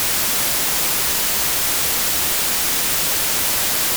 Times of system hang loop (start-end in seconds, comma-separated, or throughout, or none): none